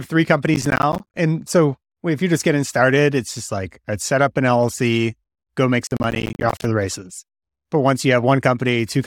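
Processor overload crackle from 0.54 to 1.17 s and again from 5.87 to 6.65 s. Missed buffers drop out as silence, roughly 10 ms each, so the speech tears into gritty crackle.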